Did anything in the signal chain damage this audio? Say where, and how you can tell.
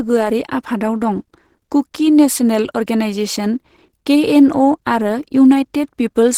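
Yes, and it sits at the codec stage for the whole clip. The speech comes across hoarse and a bit muffled, with a grainy, rough texture on the voiced parts, yet the band still reaches up to about 20.2 kHz, so nothing's been low-passed. That combination points to Opus compression, likely at a low rate around 16 kbps in its hybrid mode, where the upper bands get filled in roughly rather than coded in detail.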